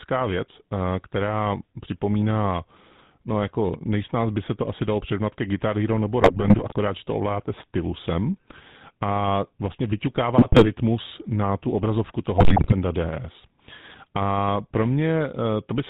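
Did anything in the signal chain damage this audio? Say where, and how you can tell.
Yes. The codec stage did it: the whole clip carries the GSM full-rate codec's plainly audible damage, a buzzy, gravelly roughness over the speech and nothing above 4 kHz. That comes from how the coder works. It models the vocal tract with a filter and drives it with a regular pulse excitation that keeps only every third sample, so fine detail and the top of the band are lost. The quality fits a 13 kbps full-rate stream.

On top of that, the network link added GSM bit errors in three bursts: 6.21–6.74 s, 10.38–10.69 s and 12.38–12.73 s. In each one the speech breaks into squawks, pops and gargling for roughly a third to half a second, then recovers. Flipped bits corrupted the filter, pitch or gain parameters reaching the decoder, so the spectrum warped or the level jumped frame after frame until the errors cleared.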